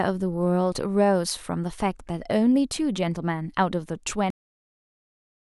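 At 4.30 s the speech stops dead in the middle of a sound, a cut-off end: the final stretch of audio was never written or played out, so the last 1.16 s of the clip is pure digital silence. What separates this from a natural pause or a fade-out is the complete absence of decay. There is no tailing off and no room tone, just an abrupt drop from active sound to silence that lasts until the file ends.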